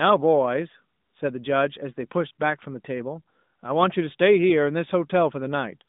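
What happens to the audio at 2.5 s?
Nothing goes wrong at 2.5 s: the speech carries straight through that moment intact, heard through the narrowband mobile line it sits on throughout, with no dropout, click or break in the sound.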